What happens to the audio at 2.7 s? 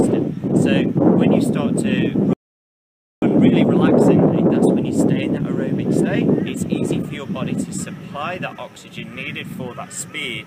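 At 2.7 s the audio is in a rebuffering stall, from 2.33 to 3.22 s: playback ran dry and paused until more data arrived, adding 0.89 s of silence. The waveform flattens to silence and the spectrogram goes blank, then the sound resumes exactly where it stopped.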